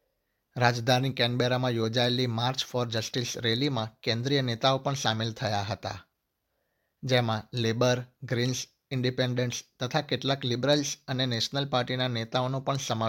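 Nothing stood out as a technical problem on listening to this recording.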